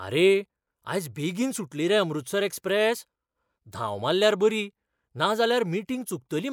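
Nothing stood out on listening to this speech recording.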